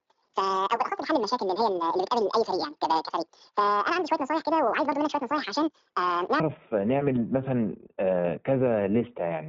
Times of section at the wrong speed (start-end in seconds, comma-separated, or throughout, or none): 0.00-6.40